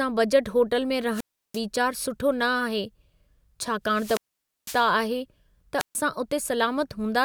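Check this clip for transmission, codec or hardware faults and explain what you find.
The analogue FM radio link fades three times, so the receiver's squelch mutes the output in a wireless microphone squelch dropout. This happens at 1.11–1.62 s, right after "बजट होटल में", at 3.87–4.92 s and at 5.78–5.96 s. Each time, hiss rises, then the speech cuts to near silence for 0.34 s, 0.50 s and 0.14 s respectively.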